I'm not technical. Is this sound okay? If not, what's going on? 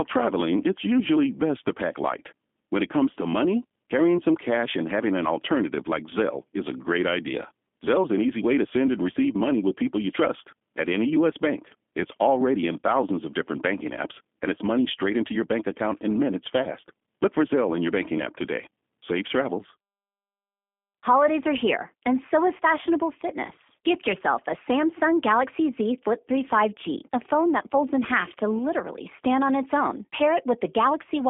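No. From start to finish the speech has passed through a G.729 codec, a phone-call compression method that rebuilds the voice from a simplified model. Everything above about 3.7 kHz is gone, so the sound is muffled, with a plainly audible rough, synthetic edge.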